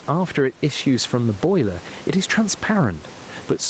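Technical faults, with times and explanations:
Throughout, gain pumping: loud and soft syllables sit unnaturally close in level, giving a flattened, squashed sound. The gain swings by around 10 dB. The likely cause is microphone gain set far too high, with a fast limiter or compressor clamping down on each loud moment and letting go in the gaps.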